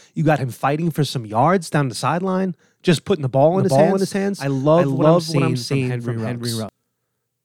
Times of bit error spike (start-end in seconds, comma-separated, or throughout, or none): none